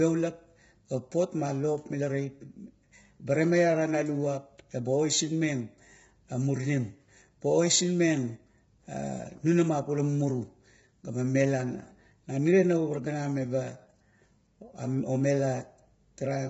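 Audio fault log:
throughout, low-delay AAC compression: short-frame coding, likely AAC-ELD near 16 kbps, blurs the pitch harmonics, so the speech sounds rough and grainy, with nothing above 7.7 kHz.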